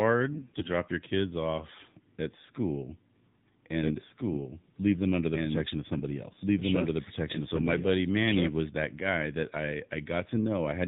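Speech carried through the AMR narrowband mobile codec throughout, with a buzzy, synthetic quality that fits the 7.4 kbps mode; a spectrogram shows nothing above 4 kHz. From 0.32 to 0.70 s, AMR bit errors make the voice hoarse and gargly while pitch and level hold, with smeared, scattered harmonics on the spectrogram. From 3.81 to 8.69 s, a doubled audio track plays a full-band copy at about equal level, roughly one and a half seconds behind, starting and stopping abruptly. A waveform shows overlapping speech envelopes with no decaying tail. This is likely a second, slower capture path or an edit holding two copies out of step.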